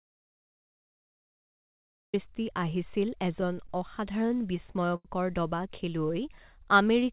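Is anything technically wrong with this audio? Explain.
Yes, there are two faults.

The first is an audio dropout to silence. It is already under way when the clip begins and lasts until 2.14 s. Nothing comes through at all, not even room tone. That points to an input that was lost while writing carried on. The likely cause is a disconnected device, a broken link or a stray mute. Whatever happened in those two seconds is gone.

The second is repeated stalls, heard as stutter, from 3.32 s to 5.07 s. The speech drags and catches about fourteen times across that span. The longest hold is about 87 ms. In all, roughly 220 ms is stretched, about 13 percent of the span. Packets arrived late, so the jitter buffer kept running dry. The receiver extended the last sound until fresh audio came. No speech is lost. The delivery is just halting and uneven.

The call path itself carries nothing above 4 kHz, which fits G.711 mu-law at 64 kbps.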